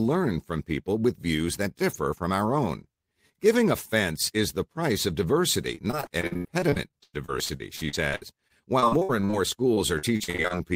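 Repeated packet loss (robotic sound) runs from 5.75 to 9.35 s and again from 9.75 to 10.52 s. In both stretches the audio keeps dropping out in quick succession, and each hole is patched by extending the last bit of sound. About a quarter of the first stretch is filled this way, with gaps up to 101 ms. The second stretch is about 30% filled, with gaps up to 42 ms. The result is a choppy texture with fragments missing.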